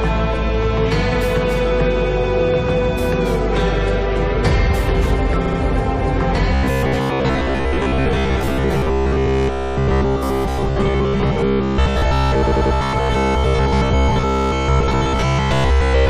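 At 5.45 to 5.59 s there are repeated frames: a block of about 70 ms of compressed audio plays twice more, adding 139 ms, and the stutter reappears at 12.46 to 12.74 s, where a 93 ms block repeats three times, adding 279 ms. A waveform shows identical segments side by side.

From 6.54 s to the end, the sound becomes a rigid metallic buzz. This robotic sound likely comes from repeated short buffers, with each 15 ms chunk replayed while most real audio is skipped. A spectrogram shows even harmonic lines spaced 66.7 Hz apart.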